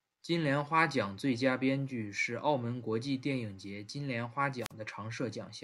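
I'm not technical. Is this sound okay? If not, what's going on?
No. Just after "节金莲花", from 4.60 to 4.72 s, there's a wireless microphone squelch dropout: the radio signal weakens, hiss rises, then the receiver mutes for about 44 ms before the speech returns. That brief static before the silence is what sets it apart from a digital glitch.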